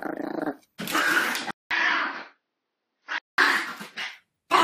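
At 1.51 s, a 200 ms gap, then dull sound cut off above 6.4 kHz. Likely an input switched to a poorer device. Clears at 3.38 s.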